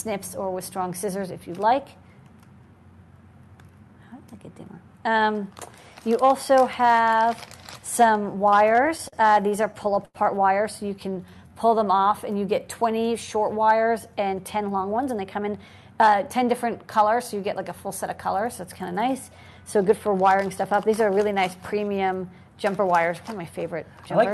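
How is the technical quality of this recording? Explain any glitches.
The recording has network-timing glitches typical of a real-time call. The audio passes through an Opus-style call codec whose spectrum stops near 12 kHz. Three kinds of fault occur between about 8.6 and 15.7 s.

Repeated stalls (stutter) occur from 8.65 to 9.14 s (five gaps, 76 ms filled, longest 40 ms) and from 9.50 to 10.17 s (six gaps, 142 ms filled, longest 93 ms). Packets arrived late, so the buffer kept emptying and the receiver extended the last sound. It drags and catches. On a spectrogram, short smeared or frozen slices show. The longest one fades in level.

A jitter buffer slow-down runs from 10.99 to 12.09 s. The receiver repeated pitch periods to rebuild its reserve, adding 116 ms and playing at 90% speed with unchanged pitch. Sounds are drawn out. The waveform shows stretched, repetitive cycles.

A jitter buffer speed-up runs from 14.20 to 15.70 s. 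Excess buffered audio was trimmed by cutting short pitch-period pieces, removing about 150 ms and playing at 109% speed with pitch intact. The passage sounds hurried. Spectrogram events crowd closer together without shifting in frequency.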